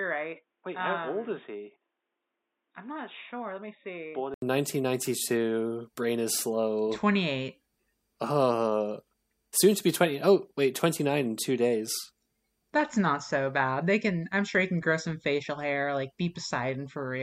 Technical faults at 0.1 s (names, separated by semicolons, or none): input switched to a poorer device